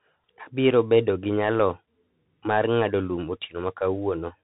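Throughout the speech, the Bluetooth CVSD headset codec is plainly audible. Nothing above 3.8 kHz survives, so the sound is narrow and muffled. One-bit delta coding, which fits a 64 kbps link, lags on loud bright sounds. S sounds turn scratchy. A granular hiss sits underneath.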